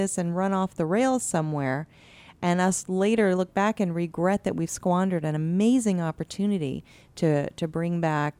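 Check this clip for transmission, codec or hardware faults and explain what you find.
One fault here: channel delay (comb filtering) from 0.52 to 3.18 s, with one channel lagging roughly one sample before the mono sum, which puts the first notch up near 20 kHz and just dulls the top end.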